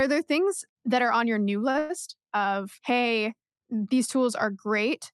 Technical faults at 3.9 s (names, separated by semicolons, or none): none